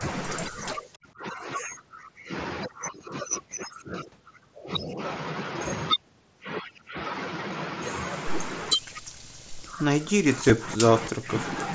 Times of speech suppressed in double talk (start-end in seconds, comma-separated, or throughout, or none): 1.00-1.18, 10.12-10.83, 11.09-11.32